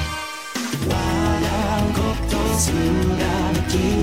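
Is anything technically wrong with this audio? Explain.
No, no technical faults detected.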